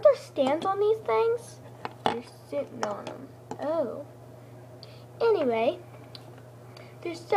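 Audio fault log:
No fault is heard anywhere in this audio.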